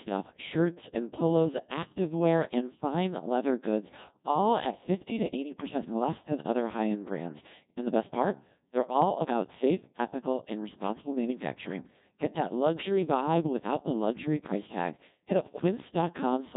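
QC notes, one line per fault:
Throughout: Codec 2 vocoder. The speech is robotic and buzzy, with heavy damage and nothing above 3.8 kHz. Only pitch, voicing, energy and a spectral envelope survive, then sine-wave resynthesis rebuilds the voice, which fits a rate near 1.6 kbit/s.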